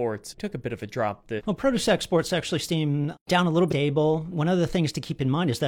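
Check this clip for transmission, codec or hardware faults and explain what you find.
There are two faults, both damaged data in a compressed stream, in this speech clip. The first runs from 1.35 to 1.42 s, right after "bit of a drop". The second runs from 3.67 to 3.73 s, just after "seem down a little". Each lasts roughly 60 ms. Corrupted bytes made the decoder misread those frames and lose sync until it found the next frame header.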